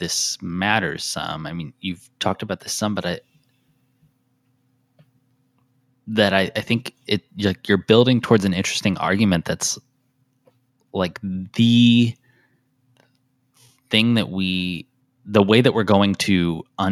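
No technical faults are audible.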